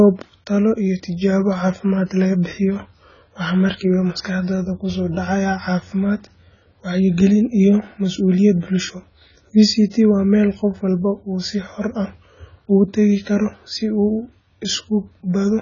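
Throughout, the speech sounds dull and smeared, with a warbling, fizzy edge on sibilants and nothing above 7 kHz. The likely cause is heavy AAC compression; the damage fits AAC-LC near 16 kbps. A spectrogram shows a hard 7 kHz ceiling.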